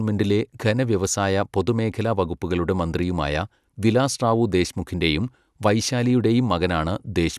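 No technical faults can be heard anywhere in the speech; the signal stays continuous and steady in level, with nothing breaking into it at any point.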